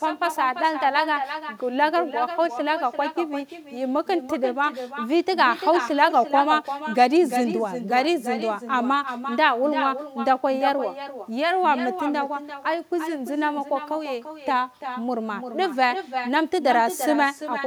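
Throughout, the far end's microphone picks up its own loudspeaker and nothing cancels it, producing echo with no canceller: every phrase of speech is shadowed roughly a third of a second later by a thinner copy about 9 dB quieter.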